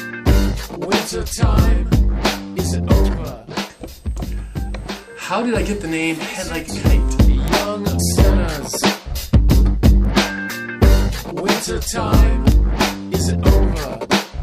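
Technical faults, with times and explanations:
6.55, 7.48, 10.05 and 12.52 s: bit error spikes, four isolated sharp ticks unrelated to the sound. Each comes from a flipped bit that makes a sample jump by a power of two and snap straight back, peaking at about -8, -2, -20 and -8 dBFS. The last spans three samples.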